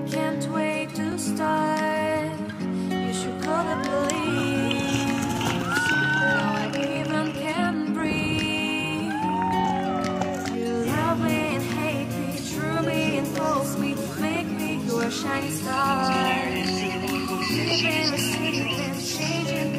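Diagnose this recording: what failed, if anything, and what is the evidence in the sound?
At the driver or buffer stage, the capture side likely fell behind the hardware, a dropped buffer (overrun), so unread samples were overwritten and the audio on either side of each gap was joined end to end. The sound has small forward skips with no silence at 1.12 s, 4.40 s and 9.65 s. The first jump loses a few milliseconds. The other two each lose only a millisecond or two.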